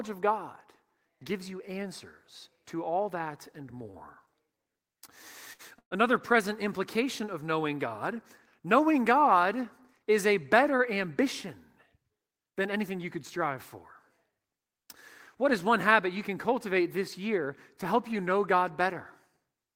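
At 5.53 to 5.62 s there is a short stall from a late packet. A packet missed its turn and the jitter buffer emptied. The last sound is stretched by 60 ms, with a faint buzz or dip, then the speech resumes where it paused. Nothing is lost.

From 5.79 to 5.94 s comes a call audio freeze, just before "present implication of knowing". The speech holds as a fading buzz or hiss for about 123 ms, 90 ms of it silent. Packets delayed in transit likely drained the buffer. The speech then continues intact.

From 11.01 to 12.46 s, between "is a better" and "than anything you could", there is a jitter buffer speed-up. The buffer held excess audio, so the receiver trimmed many tiny pitch-period slices, about a tenth of a second in total. The speech runs at 107% speed, hurried but at unchanged pitch.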